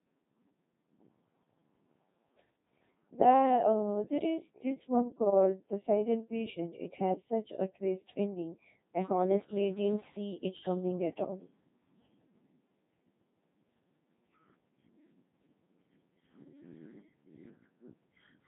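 Speech passed through the Codec 2 vocoder for its whole length, heavily damaged, with a robotic, buzzy tone consistent with a 2.4 kbit/s mode. The voice is rebuilt from sine waves, so a spectrogram shows harmonics and nothing above 3.8 kHz.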